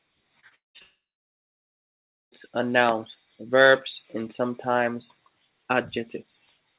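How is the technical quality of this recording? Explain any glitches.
The recording has two connected network faults early on, with sound cut off above 4 kHz as a narrowband G.711 call path would give.

Repeated packet loss (robotic sound), 0.4 to 0.82 s: gaps up to about 0.2 s are patched by stretching the last sound, leaving choppy speech with pieces missing.

Long network dropout, 0.82 to 2.34 s: likely a network outage. The last sound briefly continues as a fading buzz or hiss, then about 1.3 s of silence, and the speech resumes with that stretch gone.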